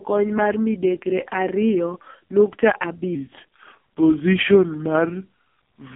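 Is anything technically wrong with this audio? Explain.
Yes, two faults are audible.

AMR narrowband mobile codec, throughout: the speech has been squeezed through the 2G/3G mobile speech codec, with heavy damage. Nothing survives above about 3.6 kHz, and the line band sits roughly between 150 Hz and 3.5 kHz. The codec rebuilds the voice from a vocal-tract model excited by sparse pulses, and the buzzy, synthetic texture fits its lowest 4.75 kbps mode. On a spectrogram, energy stops at a hard ceiling near 3.6 kHz, with smeared, blocky harmonics below it.

Section at the wrong speed, from 3.15 s to the end: right after "mar midekre ariyo nukta", the audio plays back at 0.831 times its original speed. Pitch and tempo drop together by roughly three semitones, so the voice turns deeper and draggier. The likely cause is an editor or player resampling that stretch against the wrong clock. On a spectrogram, the harmonics and formants shift downward and syllables spread wider in time from 3.15 s onward. 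In the waveform, the envelopes look stretched.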